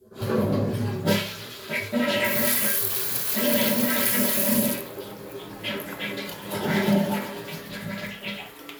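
Nothing goes wrong here at any point; the sound just carries on without a single technical hiccup to point to.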